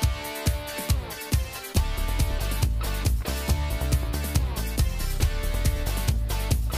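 No technical faults are audible.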